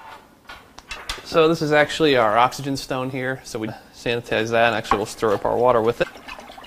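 At 0.95 to 0.97 s, 3.67 to 3.69 s and 6.02 to 6.04 s, brief blips cut through the sound. Each lasts about 20 ms. This is damaged data in a compressed stream. Corrupted bytes make the decoder misread frames and lose sync.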